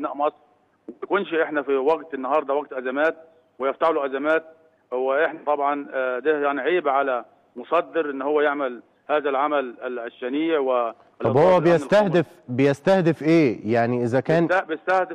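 Nothing stood out as a technical problem on listening to this audio.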